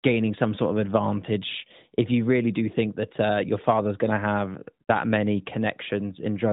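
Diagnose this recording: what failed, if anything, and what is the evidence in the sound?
Nothing failed in this recording, and the sound gives no evidence of any fault.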